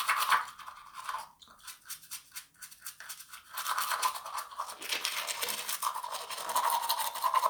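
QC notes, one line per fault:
No faults found.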